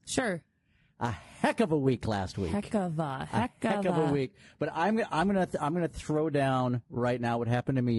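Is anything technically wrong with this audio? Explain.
Yes. Throughout the speech, the coding has the signature of low-delay AAC compression, likely AAC-ELD at a rate around 32 kbps, which fits a video-call link. To keep delay low it codes about 500 frequency lines a frame with a low-delay window, and at this low rate bits run thin. The damage is plainly audible: the voice sounds rough and grainy, noise fills the gaps between harmonics, and the top band sounds dulled or synthetic.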